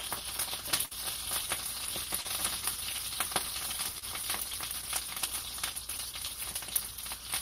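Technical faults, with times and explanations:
0.85 to 0.93 s, burst of packet loss: About 60 ms of audio failed to arrive in time, across several packets in a row or one long one. The receiver bridged the hole by extending the last received sound for roughly 54 ms and lowering its level as the gap went on, so a brief held, fading continuation is heard. Playback then picks up further along, and the material from the lost stretch is gone.
2.21 to 2.26 s and 3.98 to 4.04 s, short concealed packet loss: Each time about 40 ms of audio missed the decoder. The receiver synthesised a stand-in from the preceding sound, about 37 ms at the first point and 32 ms at the second, then crossfaded back into the real signal. The result is a brief smear or wobble rather than a hard dropout.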